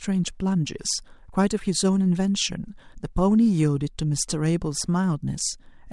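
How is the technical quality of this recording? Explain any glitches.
Nothing in this speech recording stands out as a glitch, so there's no technical problem to explain here.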